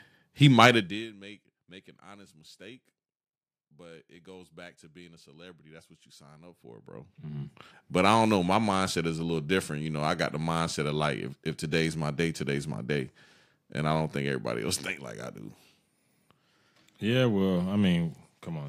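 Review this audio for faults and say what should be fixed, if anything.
Nothing needs fixing in this speech recording. The level rises and falls gradually in places, as if a fader were moved, and each change is smooth.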